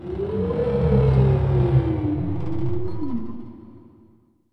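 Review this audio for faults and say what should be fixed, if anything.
No technical faults can be heard anywhere in the audio. Nothing needs to be fixed.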